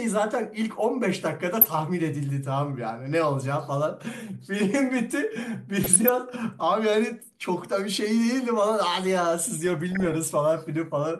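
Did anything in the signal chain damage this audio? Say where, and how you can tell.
Yes. DAB burbling damages this speech at 1.61–1.67 s, 5.84–6.09 s and 9.67–10.14 s, with the last burst longest. The fault sits at the codec stage, on the reception side. Residual bit errors, a few tenths of a percent, get past error correction into the MP2 stream. Corrupted samples put short blips of noise in individual sub-bands, and corrupted scale factors make sub-bands jump in level for up to a frame. That is the burbling heard over the speech.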